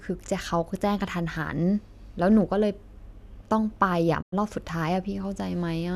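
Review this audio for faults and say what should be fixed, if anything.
A digital broadcast dropout interrupts the speech from 4.21 to 4.34 s. The receiver stopped getting valid frames, either through signal loss or checksum failures, and muted its output rather than play corrupt data. The sound fades to silence over about 20 ms, leaving roughly 96 ms of programme missing, which fits about four lost frames. The missing material cannot be recovered. To prevent this, improve reception margin with better antenna placement or signal strength, or capture from a more reliable feed.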